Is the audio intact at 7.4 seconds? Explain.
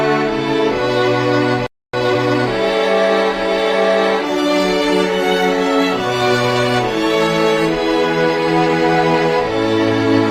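No, 7.4 s falls inside a stretch where the adaptive stream dropped to a lower bitrate, running from about 3.82 s right through to the end. The connection evidently slowed, so the player switched to a leaner version of the stream, and what you hear fits Opus stepping down from around 64 to 32 kbit/s. The shift is abrupt with no gap, and codec artefacts become more noticeable.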